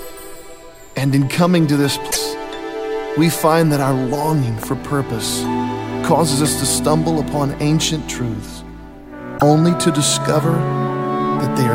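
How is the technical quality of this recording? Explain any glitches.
The recording has three audible glitches: two dropouts typical of damaged MP3 streams and one loud pop.

Broken MP3 bit reservoir, 2.10–2.17 s and 9.37–9.42 s: the sound skips forward, then sputters briefly into a garbled chirp or noise burst. The likely cause is cut frames, with the following 24 ms frames reading borrowed data from the wrong frame.

Loud pop, 4.63–4.65 s: a single sharp pop sits on top of the sound, which continues underneath, peaking around 10 dB above it. A likely cause is an electrical step or pulse, from a connector, switch, static or driver glitch, entering the signal path.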